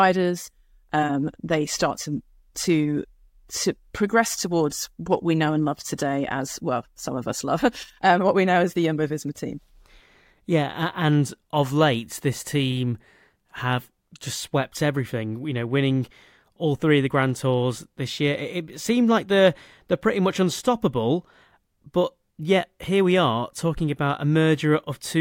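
A speech recording, and nothing technically wrong can be heard in it. No fault turns up at any point, so there are no times or causes to give.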